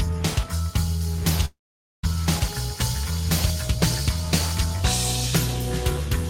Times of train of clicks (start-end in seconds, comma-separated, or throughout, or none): none